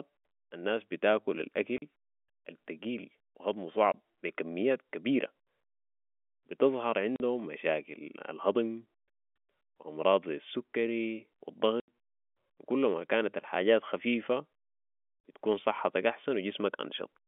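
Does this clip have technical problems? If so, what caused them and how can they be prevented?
Yes. Packet loss filled with silence leaves hard-edged holes at 1.78 s (40 ms), 3.92 s (20 ms), 7.16 s (40 ms), 11.8 s (80 ms, after "امراض زي السكري و") and 15.2 s (40 ms). Every gap is a multiple of 20 ms, which fits 20 ms packets being dropped and replaced by silence. Packet loss concealment at the receiver, forward error correction, and a more reliable network path would prevent these gaps.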